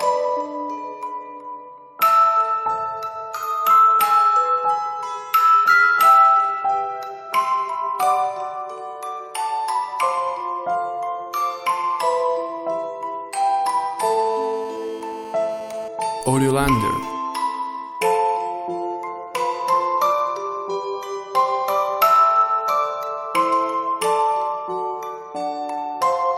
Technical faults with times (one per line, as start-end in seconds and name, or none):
14.03-15.88 GSM phone buzz
15.99-17.07 GSM signalling bursts